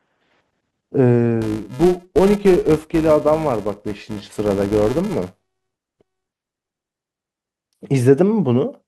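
From 1.42 to 6.97 s, a filter restarted on every block begins each from silence, giving a 375 Hz buzz that tracks the speech level and fits 128-sample blocks; spectrograms show evenly spaced vertical stripes.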